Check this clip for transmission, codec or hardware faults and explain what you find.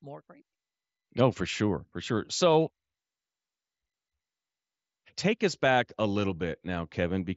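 Nothing stood out on listening to this speech recording that would call for comment.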